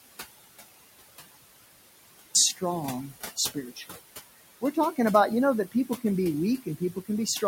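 The clip opens in an audio dropout to silence already under way, lasting until 2.35 s. The gap is silent with no room tone, most likely because the input was lost while the recorder kept writing empty samples, so anything said then is gone.

Throughout, noise suppressor artifacts are present. The room noise, sitting about 13 dB below the speech, is pulled down by about 18 dB between phrases and swells back under them.

The suppressor also cuts speech, misreading quiet parts as noise. From 3.36 to 4.0 s, roughly a third of a second is pulled down by as much as about 19 dB. From 5.72 to 6.03 s, about a tenth of a second drops by about 17 dB. From 6.58 to 7.09 s, around 150 ms drops by about 18 dB. The affected speech there sounds swallowed or faint.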